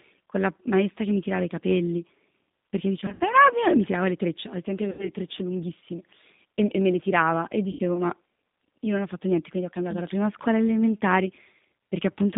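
It's a speech clip run through the G.729 codec, specifically G.729A at 8 kbit/s, and the coding damage is plainly audible throughout. The line only passes roughly 150 Hz to 3.7 kHz, so everything above that is gone. The codec doesn't send the waveform itself; it rebuilds each 10 ms frame from a vocal tract filter, a pitch predictor and a handful of pulses, which is where the rough, synthetic edge comes from. There are also three spots of VoIP packet loss concealed by the speech codec. The first runs from 3.0 to 3.23 s, with about 120 ms missing in gaps scattered over 200 ms and the longest single gap 60 ms. The second is 4.91 to 5.11 s, right after "le trecce al tempo" and just before "trecce lunghissime e e", with 80 ms missing. The third is 7.71 to 7.80 s, straight after "me le tirava e", again 80 ms. In each one the decoder fills the hole by stretching its last pitch and filter while pulling the gain down, so you get a fading buzzy or noisy smear, and the sound stays off for a bit after the packets come back.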